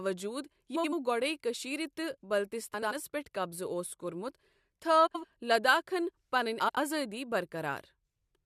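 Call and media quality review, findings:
Frames out of order at 0.75–0.93, 2.74–2.92 (before "پیٚٹھ قبضہٕ اوس کوٚرمُت"), 5.06–5.25, 6.60–6.78 s: speech flutters as two adjacent blocks of about 85 ms play swapped, likely in the jitter buffer. No time is lost, unlike a dropout.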